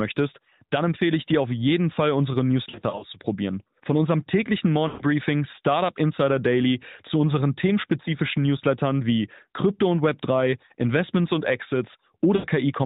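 Lost AMR speech frames first appear between 2.70 and 3.04 s. About 140 ms of audio is missing, spread over 320 ms in short runs of no more than 40 ms. Each gap sounds like a brief dip or warble. On a spectrogram, the harmonic bands smear into flat, repeated slices.

Right after "unserem täglichen", from 4.88 to 5.04 s, a 120 ms run fits about six 20 ms frames. The decoder keeps reusing the last good pitch and vocal-tract settings, so the sound is drawn out and then fades. On the waveform, the envelope tapers toward silence before the speech resumes weakly.

From 12.36 to 12.46 s, an 80 ms gap repeats this at a smaller scale.

Throughout the clip, nothing above 4 kHz is present, and the sound has a slightly synthetic edge. This points to the AMR narrowband mobile codec at around its 12.2 kbps mode.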